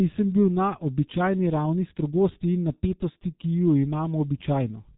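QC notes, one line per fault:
Throughout, G.723.1 codec: the speech sits behind a hard wall at about 3.8 kHz, so it comes across muffled and boxy, with sibilants and consonant edges smeared. There's a heavy hoarse, buzzy texture too, because the codec rebuilds the voice from a coarse model updated only every 30 ms frame, and the fine detail between updates just isn't there. The damage level fits the codec's higher-rate mode, around 6.3 kbit/s.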